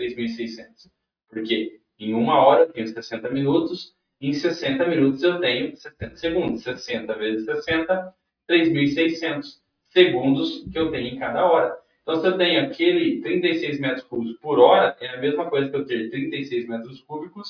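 No technical faults can be heard in this audio, so there is nothing to place in time order.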